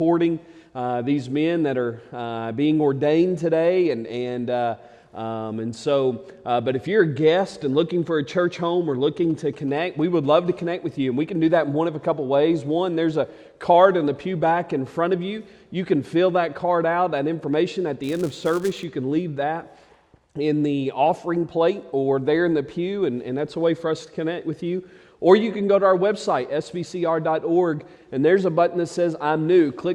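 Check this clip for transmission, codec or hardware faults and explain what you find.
Three faults turn up: two bursts of mobile-phone interference close together and one block-processing error later on.

From 9.30 to 10.26 s, GSM signalling bursts: a nearby 2G phone sends short groups of radio bursts at 216.7 Hz while signalling, and the audio circuitry rectifies them. They come through as a galloping dit-dit-dit of short 216.7 Hz buzzes, some 25 dB below the signal.

From 10.46 to 11.47 s, GSM phone buzz: the phone is now in a call, transmitting in bursts 216.7 times a second, and the rectified pulses produce a steady, hard, raspy 216.7 Hz buzz rich in harmonics, about 35 dB below the signal and unrelated to it.

From 18.03 to 18.84 s, filter restarted on every block: the filter discards its state at each block boundary and starts from silence, so every block opens with a small transient. 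These repeat as a 200 Hz buzz that rises and falls with the signal's level.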